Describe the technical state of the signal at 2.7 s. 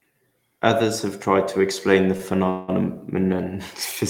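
At 2.7 s the speech, just after "tried to explain the", is held as a fading buzz from 2.50 to 2.83 s, a call audio freeze, likely from delayed packets draining the jitter buffer.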